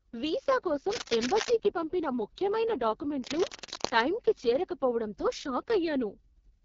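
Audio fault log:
throughout: AMR wideband (HD Voice) codec. The speech sounds rough and raspy, with nothing above 7.1 kHz and a thin, noise-filled top band. This heavy coding damage fits AMR-WB's lowest 6.6 kbit/s mode, where the pulse model is too sparse to rebuild the voice cleanly.
0.90–1.52 s and 3.22–4.02 s: cable scratch noise. Dense, uneven scratching bursts sit over the speech, the first just before "పంపిన ముఖ్యమైన" at roughly the speech's own level, the second just after it and somewhat quieter. The likely cause is a worn connector or cable moving and rapidly changing its contact resistance.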